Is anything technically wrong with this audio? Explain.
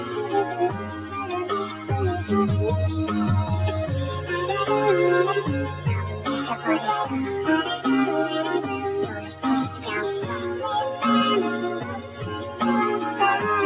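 Yes. The audio went through a call path, with nothing above 4 kHz, consistent with 64 kbps G.711 mu-law, and a speech-tuned noise suppressor damaged it.

Noise suppressor applied to music or sounds: A suppressor built for speech stayed active throughout and mistook sustained tones, ambience and reverb for noise. It pushes them down by around 5 dB, so held sound pumps and thins while sharp attacks mostly pass intact.

Sound cut by the noise suppressor: At 0.70 to 1.14 s, 5.68 to 5.86 s, 6.07 to 6.26 s, 9.07 to 9.43 s, 9.71 to 9.86 s and 12.00 to 12.15 s, the suppressor judged the sound to be noise and pulled it down harder, by about 5 to 7 dB. Steady or decaying sound sinks and its tails are shortened.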